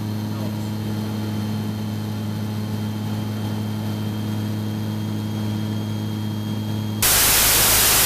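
From 7.03 to 8.05 s, a wrong sample width fault takes over. Data written as 32-bit integers are read as 16-bit. Each sample splits in two, and the low halves are pure noise. The sound plays at half speed, an octave lower, buried in loud hiss.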